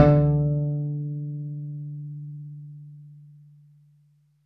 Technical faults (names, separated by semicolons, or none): none